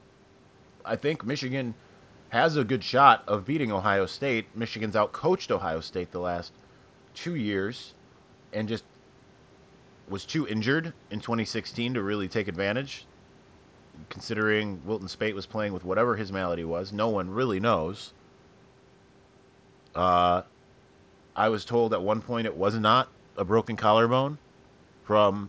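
No technical fault can be heard in this speech recording. Nothing reaches above 8 kHz, and loud sounds carry a light grain, which together point to a Bluetooth mSBC headset codec after the call microphone processing.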